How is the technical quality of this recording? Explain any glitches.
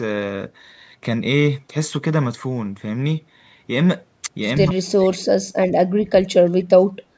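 The recording has two clear problems, both typical of a hands-free call: a brief echo and repeated dropouts in the talker's speech. The bandwidth stops at 8 kHz, which is ordinary for call audio.

Echo leak, 4.65 to 4.69 s: a faint, short ghost of speech appears, roughly 30 dB below the main voice and trailing it by about 157 ms. This is likely a loudspeaker-to-microphone path on the far end. The echo canceller failed to remove a short piece of what the microphone picked up from the loudspeaker, so that piece came back down the line as a delayed copy.

Speech suppressed in double talk, 4.67 to 5.39 s and again from 6.0 s to the end: the talker's voice sinks sharply, falling by something like 40 dB at its deepest and breaking into fragments for about 0.7 s and then about 1 s. This happens because both sides were likely talking at once. The echo canceller could not separate the local talker from the returning loudspeaker sound, so it turned everything down together.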